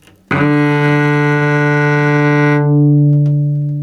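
Gain pumping runs throughout: the gain ducks around 10 dB under each loud sound, likely from excessive input gain driving a fast limiter.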